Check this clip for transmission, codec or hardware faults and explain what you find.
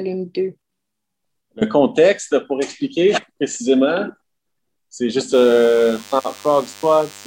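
One fault is present: DECT cordless phone buzz, running from 5.34 s to the end of the clip. A DECT handset or base station close to the equipment transmits a short radio burst every 10 ms. The audio circuitry rectifies that RF energy and turns it into an audible signal repeating at 100 Hz. The result is a thin, steady buzz rich in harmonics, sitting roughly 25 dB below the wanted sound and persisting unchanged until the audio ends.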